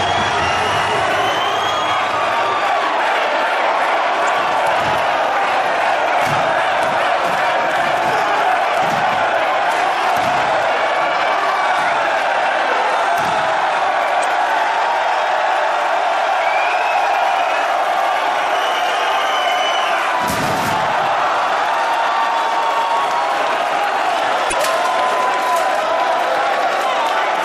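Three brief spots of damaged data in a compressed stream, at 4.25–4.29 s, 14.20–14.24 s and 24.49–24.54 s, each about 44 ms. Bad bytes make the decoder misread frames and lose sync until it finds the next header, leaving a short glitch each time.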